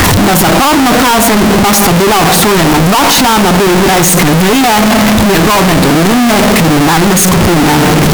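Speech, with a likely float read as integer fault throughout: 32-bit floating-point samples appear to be interpreted as 32-bit integers, so sign and exponent bits dominate. The waveform turns nearly square at an almost fixed, high level, very loud and harsh, with background noise as loud as the voice, though pitch remains followable.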